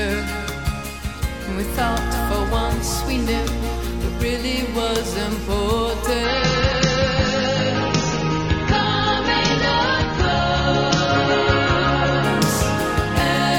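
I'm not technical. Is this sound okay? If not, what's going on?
No. From 6.24 to 12.24 seconds the sound turns dull and watery, losing its crisp top end above 6.9 kHz, then snaps back. This is an adaptive stream at a lower bitrate: the connection slowed, so playback switched to a lower-quality version for a while.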